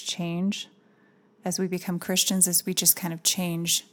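From 1.73 s, just after "as we", to the end at 3.92 s, pre-emphasis is left on: a 75 µs FM treble lift with no matching de-emphasis, about 14 dB stronger at 10 kHz than at 1 kHz, so the speech turns thin, bright and hissy. Unlike ordinary sibilance, the lift rises steadily above roughly 2 kHz and stays on.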